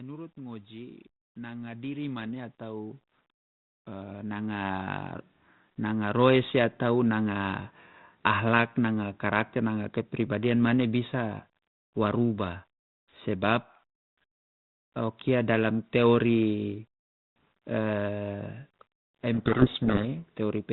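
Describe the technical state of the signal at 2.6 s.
Automatic gain rising, from 0.34 to 3.05 s: the gain control judged the input too quiet and ramped up about 11 dB, so speech and background swell together.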